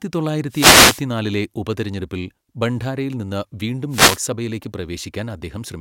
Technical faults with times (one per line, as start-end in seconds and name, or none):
0.48-1.04 wireless microphone noise hit
3.89-4.21 wireless microphone noise hit